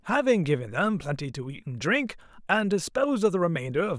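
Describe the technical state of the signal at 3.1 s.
At 3.1 s the speech signal is intact, with no audible fault at that moment.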